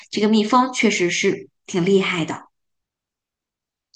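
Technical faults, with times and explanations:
Nothing stood out on listening to this recording.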